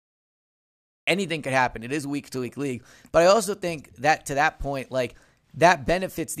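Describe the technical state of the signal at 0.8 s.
At 0.8 s there is only dead digital silence, and the speech then bursts in abruptly at 1.08 s, mid-sound, just before "could happen", with no natural attack. This is a cut-off start: capture began late, so everything before 1.08 s is missing.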